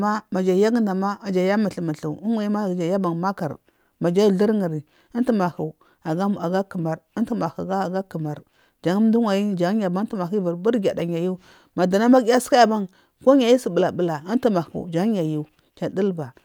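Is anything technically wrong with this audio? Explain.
No, nothing is technically wrong.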